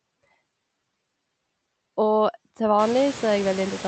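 Noise suppressor artifacts run throughout: steady background is cut by about 17 dB, so it sinks between words and returns beneath speech band by band, not switching wholesale like a gate. Around three seconds, room noise rises by about 21 dB, sitting about 15 dB below speech.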